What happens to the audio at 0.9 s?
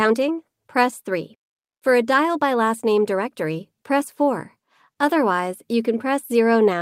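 At 0.9 s the audio plays through intact, with no dropout, click, distortion or other fault at that moment.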